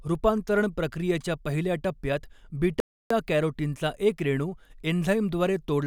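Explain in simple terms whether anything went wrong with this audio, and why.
A playback stall occurred, likely because the player briefly ran out of data: after "रूपांतरण प्रक्रियेच्या पहिल्या टप्प्यात" the speech goes silent from 2.80 to 3.10 s, then resumes at "कॅरोटीनचा एक रेणू".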